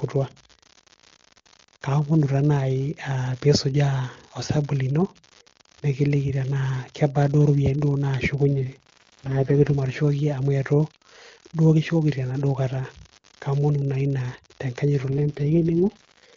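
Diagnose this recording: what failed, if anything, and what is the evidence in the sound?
An unreliable data bit sits at the converter or digital interface. A steady fine crackle runs the whole length of the speech and continues through the pauses. One marginal data line flips its bit in random samples, so each error lands as an identical-sized spike.

An AMR rate drop happens on the radio network link, from 8.50 to 9.74 s and again from 15.10 s to the end. The speech turns rough and raspy with no gap and no change in bandwidth. This fits the AMR-WB link falling from 23.85 to 6.6 kbit/s to protect bits on a weak link.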